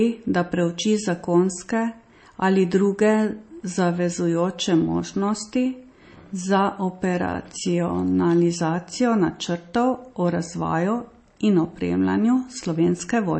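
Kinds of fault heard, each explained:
MP3 compression: watery, swirly speech with nothing above 8.3 kHz, likely from a low bitrate around 32 kbps cutting treble and dropping weak frequency lines.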